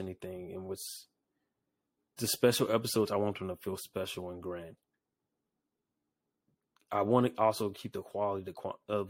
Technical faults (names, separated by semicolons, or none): none